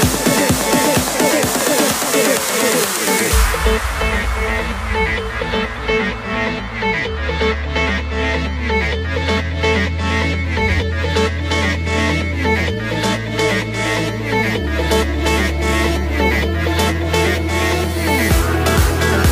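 No technical faults are audible.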